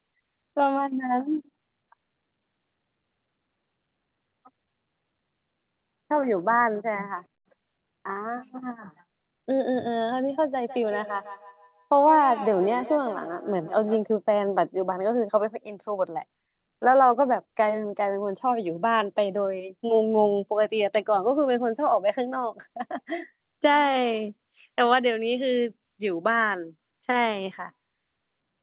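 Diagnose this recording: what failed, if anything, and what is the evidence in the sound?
Feedback echo between two devices, a call-processing failure, runs from 10.65 s to 14.13 s. Each stretch of speech returns at a steady interval of roughly 150 ms, thinner and more ringing on each pass, peaking about 13 dB below the direct speech. A second device in the room is playing this talker's audio back into the open microphone, and that microphone's echo canceller cannot remove sound it did not play itself. The echoes are confined to the narrow band below 4 kHz heard throughout, which fits a G.711 call path.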